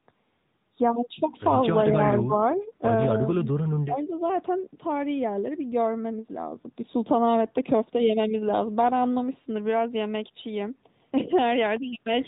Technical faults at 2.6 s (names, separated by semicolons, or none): AMR narrowband mobile codec; echo leak